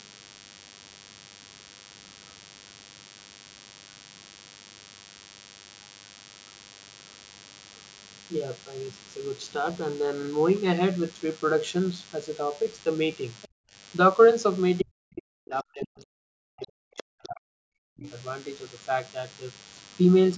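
A DECT cordless phone buzz runs under the whole speech clip: a thin, steady 100 Hz drone rich in harmonics, roughly 25 dB below the speech, from a nearby handset's 10 ms radio bursts being rectified in the audio circuit. At 13.42 to 13.48 s a brief scrap of the other side's voice leaks through, about 25 dB under the talker, likely residual loudspeaker echo the canceller missed. From 13.48 to 13.74 s the background is gated by the echo canceller, dropping by up to about 40 dB before the room tone returns. Between 14.81 and 18.08 s the talker's speech is suppressed in double talk, dipping by as much as 40 dB, with the canceller likely ducking both voices at once. At 16.97 to 17.03 s the other side's voice leaks through again, about 20 dB below the speech.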